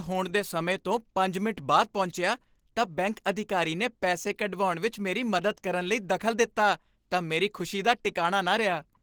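From start to finish the speech carries Opus compression damage, plainly audible as a hoarse, muffled quality with grainy, noisy texture where the voice should be smooth. The likely cause is a low-rate encode that switched to the hybrid speech mode, which fits a bitrate near 16 kbps. On a spectrogram, content reaches to about 20.2 kHz but the upper bands look smeared and noise-filled rather than harmonic. The waveform shows no obvious clipping or gaps.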